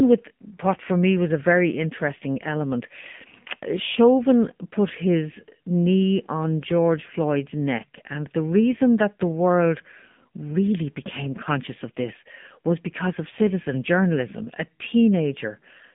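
From start to finish the speech sounds thin, buzzy and somewhat synthetic, with nothing above about 3.7 kHz and little below 150 Hz. This is the AMR narrowband mobile codec, which rebuilds the voice from a vocal-tract model at a low bitrate consistent with its 7.4 kbps mode.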